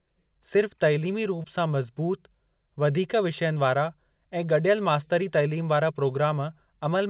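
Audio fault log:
1.36–1.40 s, short stall from a late packet: a packet arrived late and the jitter buffer ran dry, so the receiver held the last sound for about 18 ms, then resumed exactly where it left off. Nothing is lost. The sound is only drawn out, with a faint buzz or dip, and everything after it lands about 18 ms later. Unlike concealed loss, no part of the sound is skipped; it is only stretched.
1.42–1.46 s, short concealed packet loss: about 20 ms of audio never reached the decoder, and the receiver covered the gap with about 19 ms of invented continuation, extending the preceding sound's pitch or shaped noise before crossfading back into real audio. It sounds like a brief smear or wobble, heard through the G.711 mu-law band limit at 4 kHz. Unlike the stall just before it, the real audio here is lost and replaced, so a brief sound can drop out.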